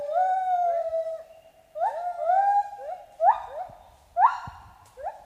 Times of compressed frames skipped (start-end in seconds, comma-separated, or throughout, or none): none